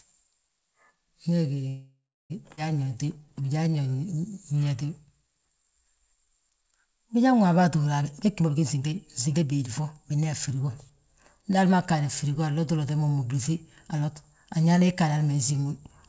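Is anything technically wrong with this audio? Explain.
Yes. Four timing faults affect this speech clip, all tied to the call's packet delivery and jitter buffer, which sits on a band-limited path with nothing above 8 kHz, consistent with G.722.

Call audio freeze, 1.68 to 2.32 s: packets were likely held up in transit, so the jitter buffer ran dry. The receiver stretched the last sound into a fading buzz or hiss, with about 0.3 s of silence within the 0.62 s gap. Speech then resumes where it stopped, with nothing lost.

Skip ahead, 2.56 to 2.59 s: a stretch of roughly 0.4 s of audio was discarded while later packets were already queued. Playback jumps forward abruptly, splicing the two sides together with almost no gap, so that portion of speech is simply gone.

Jitter buffer slow-down, 2.84 to 6.27 s: to build up a reserve, the buffer repeated single pitch periods and bits of pauses many times over, adding 0.37 s. 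Speech plays at 89% speed at unchanged pitch, sounding drawn out.

Jitter buffer speed-up, 8.01 to 11.95 s, ending just before "firigo anlotu lote": the buffer held too much audio, so it repeatedly cut short pieces of one or a few pitch periods, removing around 0.7 s. Speech runs at 115% speed, same pitch, and sounds hurried.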